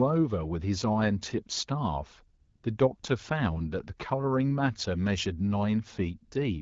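At 2.41 to 2.63 s and again briefly at 2.99 to 3.03 s, you get AMR comfort noise. The phone decided nobody was talking, stopped sending speech frames, and the far end papered over the gap with smooth synthetic hiss that switches abruptly in and out.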